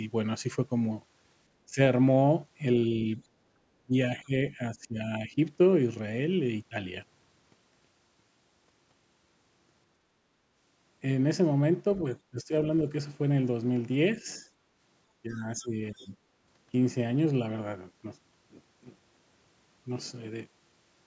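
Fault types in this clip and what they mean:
speech suppressed in double talk: The speech level dips in five places, near 1.66 s, 3.84 to 5.38 s, 12.31 s, 14.23 s and 15.23 to 16.14 s, by up to about 20 dB, most likely because the echo canceller could not separate this talker from the loudspeaker echo during simultaneous talk.
other side's voice leaking through: From 15.32 to 16.08 s a faint second voice sits roughly 30 dB below the main speech, overlapping the last dip. It is likely loudspeaker playback that the echo canceller left in the microphone signal.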